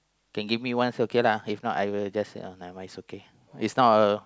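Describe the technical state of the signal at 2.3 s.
At 2.3 s the speech signal is intact, with no audible dropout, distortion, clipping or other fault at that moment.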